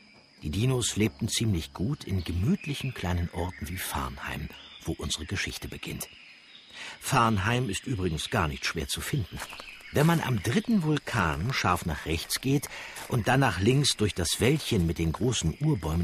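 Nothing in this audio points to a technical problem in how the signal was captured, processed or delivered.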